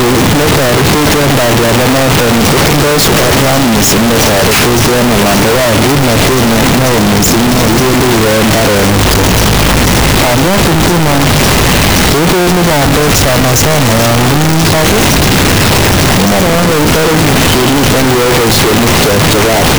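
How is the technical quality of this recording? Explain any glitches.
The technical quality is very poor. One fault runs through the whole speech recording.

From start to finish, the sound is buried under loud, harsh distortion. Quiet stretches are as loud as the rest, so there is no real dynamic range. The likely cause is signed and unsigned samples mixed up in the 8-bit data. Reading the format the wrong way flips the top bit of every sample. Each time the waveform crosses zero, the value leaps across the full range. That constant jumping becomes the harsh, level-flattening roar.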